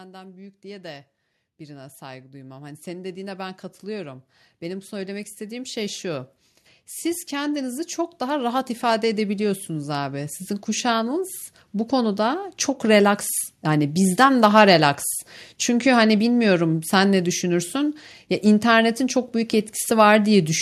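A speech recording with automatic gain rising twice: the gain control judges the input too quiet and ramps up, lifting voice and background together by about 13 dB from 0.05 to 6.32 s, then about 8 dB more from 7.29 to 11.37 s.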